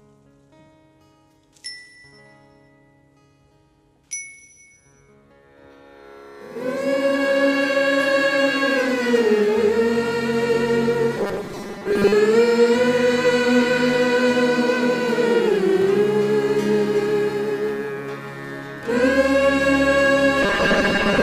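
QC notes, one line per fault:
11.17 to 12.13 s and 20.43 s to the end: robotic sound from repeated short buffers. The audio goes rigid and metallic, with a fixed buzz at 200 Hz sitting on top while the sound underneath still loosely tracks its original shape. That pitch matches a 5 ms chunk being looped, likely because new audio was arriving too slowly, so about half of what you hear is repeats standing in for material that got skipped.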